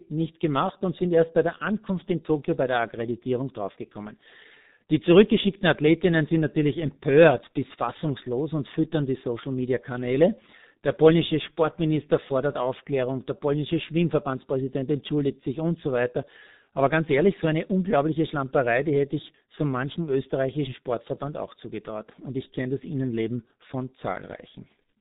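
G.723.1 codec damage runs throughout the speech, from start to finish. The codec's 30 ms frames and slow-updating voice model blur consonants into a hoarse, muffled sound, with nothing above 4 kHz surviving. The heavy damage fits a bitrate near 6 kbit/s.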